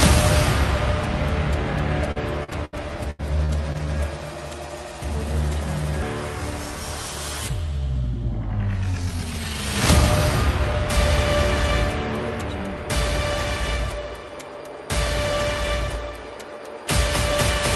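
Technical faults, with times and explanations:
2.11–2.75 s, repeated packet loss (robotic sound): four gaps in quick succession, the longest about 76 ms, with about 180 ms lost in all. Each hole is patched by stretching the last sound onward, so about a quarter of this stretch is synthetic. The result sounds choppy, with pieces missing.
3.11–3.21 s, burst of packet loss: about 80 ms goes missing in one block. The receiver carries the last sound forward and turns it down as the gap lasts. The result is a held, fading sound, and then the audio jumps ahead with that piece gone.
3.45–3.51 s and 3.73–3.76 s, short concealed packet loss: holes of about 40 ms and 20 ms. Each is bridged by continuing the preceding sound and then blending back into the real signal. Both are heard as brief smears or wobbles rather than clean gaps.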